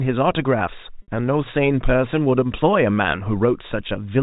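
At 1.02 to 1.08 s, packet loss with pitch repetition bridges a 60 ms gap by replaying the last pitch period of the speech, which fits two lost packets. Unlike a plain dropout, there is no hard silence or click, only a brief held, buzzy tone that fades.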